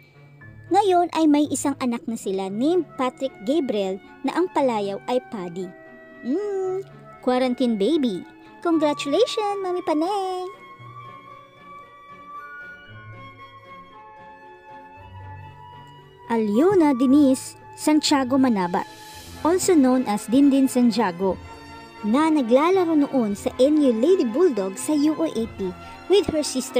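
No technical faults can be heard anywhere in the recording, and the signal stays steady and intact throughout.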